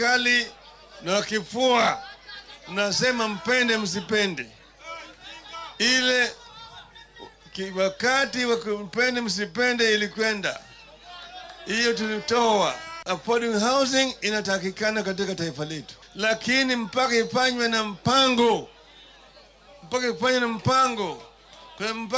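No technical faults are audible.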